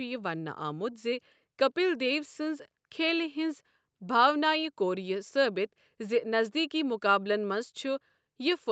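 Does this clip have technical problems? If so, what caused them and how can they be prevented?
No, no technical faults heard.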